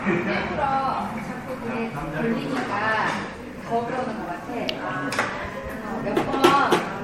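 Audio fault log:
throughout generation loss: swirly, hollow sound, blurred attacks, nothing above 16.7 kHz; likely about four MP3 re-encodes, worse than one encode would leave.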